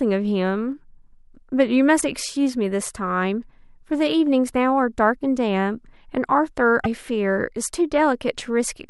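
Speech, with a likely broken MP3 bit reservoir: after dropped frames, the next frame borrows bytes from the wrong frame, so the audio jumps ahead with a brief chirp, burst of noise or short hole at 2.00–2.03 s and 6.83–6.86 s, each about one 26 ms frame.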